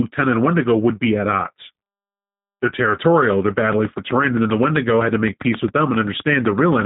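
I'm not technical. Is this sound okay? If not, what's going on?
No. From start to finish the speech sounds slightly rough, buzzy and synthetic, like a cheap phone line, with no crisp highs above 3.8 kHz. This is G.729 codec damage: a low-data internet-calling format that rebuilds speech from a rough model of the voice rather than sending the real sound.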